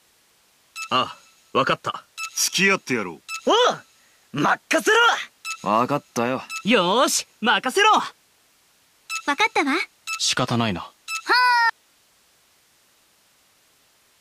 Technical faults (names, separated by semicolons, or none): audio dropout to a faint residue